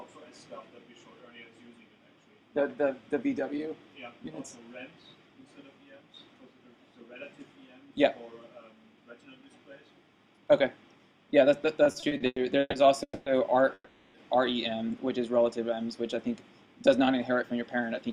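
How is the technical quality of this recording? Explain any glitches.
The recording has a cluster of network-related glitches in its second half: a stuttering stretch, two short freezes, and a final hurried passage.

From 11.83 to 12.76 s the audio drags and stutters in repeated stalls, with seven brief hangs where the last sound is held, the longest 130 ms. Packets kept arriving late, so the jitter buffer repeatedly ran dry and about 39% of that span is filled-in sound. Nothing is lost.

At 13.03 to 13.29 s a call audio freeze holds the sound as a fading buzz or hiss, ending in about 70 ms of silence before the audio resumes where it stopped. This is likely packets held up in transit, inserting a 230 ms gap.

A second call audio freeze at 13.74 to 14.17 s behaves the same way but lasts longer. The held sound fades to roughly 60 ms of silence, adding a 400 ms gap, again likely from delayed packets emptying the buffer.

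From 16.62 to 18.10 s the audio sounds rushed at unchanged pitch, running at 112% speed. This jitter buffer speed-up comes from the receiver trimming many tiny pitch-period slices, about a fifth of a second in total, to shed the extra delay it was holding.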